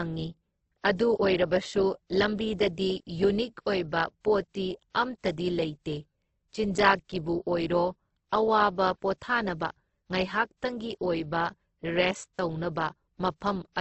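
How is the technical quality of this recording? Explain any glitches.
The recording sounds dull from start to finish, with nothing above about 8.2 kHz and two layers of coding artefacts heard together, a pattern that points to transcoding between lossy codecs. The likely chain is a very low-rate Opus encode, around 12 kbit/s, later re-encoded to WMA at around 96 kbit/s. The second codec spends its bits preserving the first codec's damage and adds its own, while the lower cut-off from the first pass remains.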